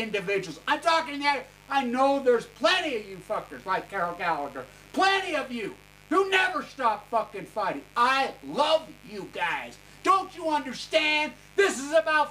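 A steady, raspy buzz sits under the sound from start to finish, well below the main signal at roughly 25 dB down. This is mains buzz on a 50 Hz supply: something like a dimmer, a rectifier or an unshielded cable is injecting sharp switching spikes twice per mains cycle, so energy lands on a whole ladder of 50 Hz harmonics stretching up to several kHz, giving the buzz its edgy, rasping texture.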